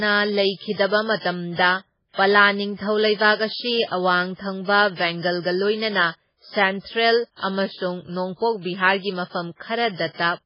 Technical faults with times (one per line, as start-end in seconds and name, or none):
0.00-10.46 MP3 compression